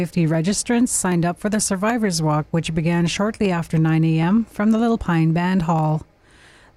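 From 0.34 s to 6.57 s, a click recurs every 0.78 s, likely clock drift buffer slips. The spectrogram shows evenly spaced thin vertical lines.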